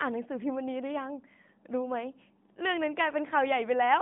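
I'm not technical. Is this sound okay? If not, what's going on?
Yes, nothing has gone wrong with this speech recording. It has the narrow, phone-call sound of the AMR narrowband mobile codec used on mobile networks, which carries nothing above about 3.7 kHz.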